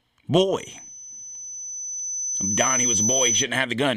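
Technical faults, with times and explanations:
0.58–3.46 s loudspeaker feedback squeal: a 6 kHz tone swells over about two seconds to roughly 5 dB above the speech, the microphone re-amplifying its loudspeaker.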